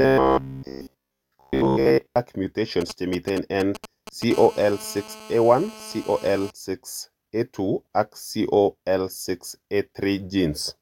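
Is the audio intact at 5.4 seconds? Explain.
No. From 4.34 to 6.51 s a GSM phone buzz sits about 19 dB below the speech: a nearby phone on a call pulses at 217 Hz and the circuit rectifies it. That harsh, harmonic-rich rasp at a steady pitch is unlike smoother 50 or 60 Hz mains hum.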